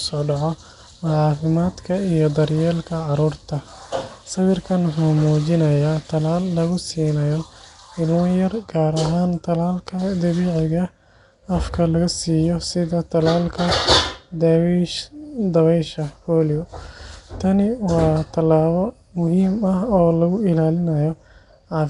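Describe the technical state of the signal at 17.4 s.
At 17.4 s, as across the whole clip, the speech has likely passed through Nellymoser compression, the old Flash microphone codec. It codes short fixed blocks at two bits a sample, and bands too weak to earn bits are filled with noise, at a rate that fits about 44 kbps. Nothing is left above 10.6 kHz. The damage is plainly audible: a rough, hissy halo around the speech and a smeared, underwater quality.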